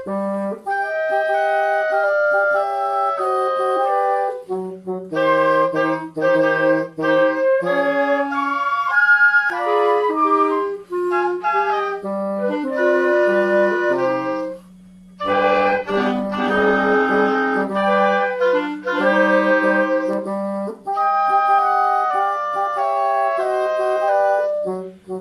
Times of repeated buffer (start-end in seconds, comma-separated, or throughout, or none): none